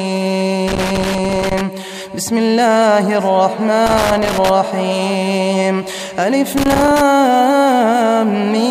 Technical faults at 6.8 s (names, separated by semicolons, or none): loose connector crackle